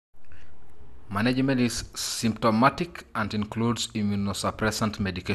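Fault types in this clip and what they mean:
MP2 compression: The speech is dull and carries a gurgling, grainy roughness from start to finish. Nothing is heard above about 12.2 kHz. The damage is plainly audible. The likely cause is MPEG Layer II coding, which divides the sound into 32 sub-bands and shares out a limited bit budget. Here the budget, which fits about 80 kbps, left the top bands silent and quantised the remaining ones coarsely.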